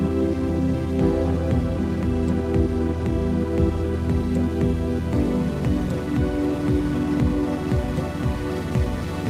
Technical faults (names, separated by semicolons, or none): none